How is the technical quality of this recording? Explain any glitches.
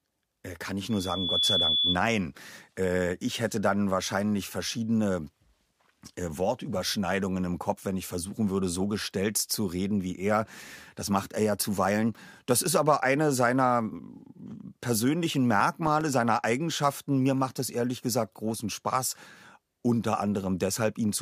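The recording has two clear glitches, a feedback squeal near the start and a burst of disc-scratch ticks later on.

From 0.90 to 1.99 s, just after "kann ich", there is loudspeaker feedback squeal. The microphone re-captured its own loudspeaker, and at 3.4 kHz the loop gain passed unity. That tone swells over about half a second into a piercing whistle roughly 5 dB above the speech.

From 15.07 to 16.40 s come CD scratch ticks. A surface blemish wiped out more data per revolution than error correction could restore, so the player patched or muted the damage. The result is eleven regular ticks, about eight a second, each only a few milliseconds long.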